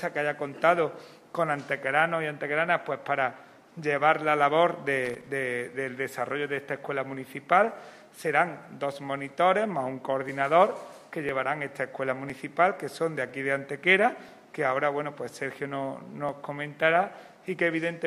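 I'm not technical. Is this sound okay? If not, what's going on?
No. Loose connector crackle appears from 5.05 to 5.28 s: a brief burst of scratchy crackling. A worn or dirty plug contact is flickering between touching and not touching, so the sound keeps cutting in and out very rapidly.

Periodic USB or driver dropouts start at 9.3 s and run to 17.28 s, giving around ten small ticks spaced 1 second apart. Each time, the computer briefly stalls while handling audio and skips about a millisecond of sound.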